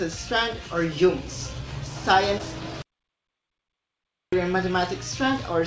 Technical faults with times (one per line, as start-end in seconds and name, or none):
2.82-4.32 audio dropout to silence